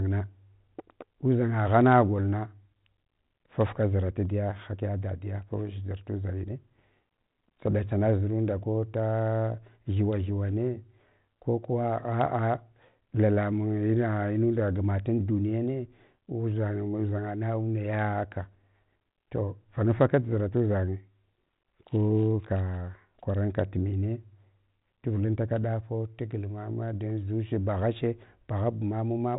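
Nothing goes wrong anywhere in this speech, which just carries the mild, telephone-band character you'd expect from G.726 at 32 kbit/s.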